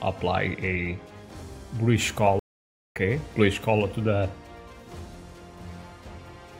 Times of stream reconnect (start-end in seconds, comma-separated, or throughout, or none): 2.39-2.96